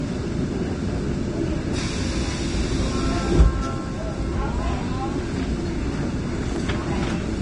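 Everyday sound with a grainy, hissy treble and roughened, smeared detail throughout, the plainly audible damage of Vorbis compression, likely at a low bitrate around 30 kbps. A spectrogram shows nothing above 10.5 kHz and speckled, blotchy texture in the upper bands. At 6.56 to 6.59 s a single loud pop, likely a voltage spike, stands about 10 dB above the surrounding sound, a narrow spike on the waveform and a thin vertical stripe across all frequencies on the spectrogram, with the sound continuing underneath.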